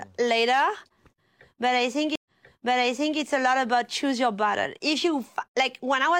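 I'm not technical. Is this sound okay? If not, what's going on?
No. At 2.16 s there is a stream reconnect. The connection dropped, and the speech stops for about a tenth of a second. When it comes back, playback has jumped back about 0.94 s, so you hear that stretch again, up to 3.19 s.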